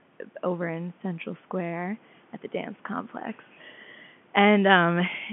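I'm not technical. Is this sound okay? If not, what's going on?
Yes, nothing in this speech recording points to a fault. It has the narrow sound of an ordinary landline call, carried in standard G.711 telephone coding, so the highest sounds stop at about 3.7 kHz and the deepest tones are thinned out.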